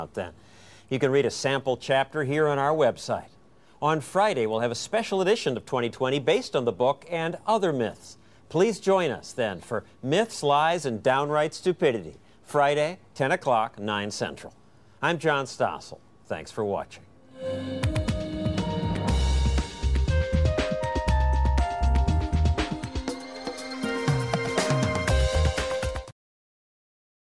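Nothing here stands out as a technical fault, just the recording running along without any glitch to point to.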